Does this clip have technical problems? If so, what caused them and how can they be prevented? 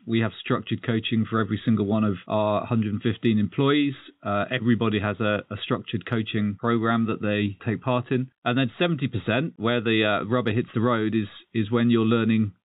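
No, this speech shows no technical problems; it carries the narrow band of G.711 telephone coding, with nothing above 4 kHz and at most a faint level-following hiss from that format.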